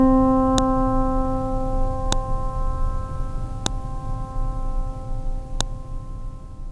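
At 0.58, 2.12, 3.66 and 5.61 s the music is broken by a sharp, loud snap, each lasting only a couple of milliseconds. This is a file header played as audio: each piece was joined on without its WAV header being stripped, so those few dozen bytes were decoded as samples. Unlike clipping or dropout clicks, the snaps ignore the music's level and sit exactly at each joint, with no gap or missing sound around them.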